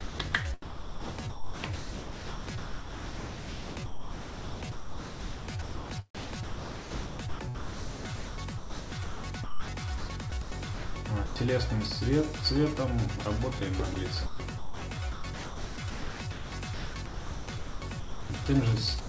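From 0.01 s to 11.36 s the audio is chopped by the voice detector: the sender's activity detection most likely kept toggling transmission off and on, and roughly 7.9 s of that span was replaced by comfort noise. The result is choppy, with quiet passages and sound edges cut away, all within a band that stops at 8 kHz. The same pattern returns from 13.94 s to 18.46 s, where about 2.7 s is filled with comfort noise.

At 19.00 s the sound is dropped by the voice detector. Transmission likely stopped because the detector judged the final material to be background, and the last 91 ms, through to 19.09 s, is lost entirely and replaced by steady comfort noise. The audio does not return, so the clip ends on synthetic noise instead of its actual closing sound.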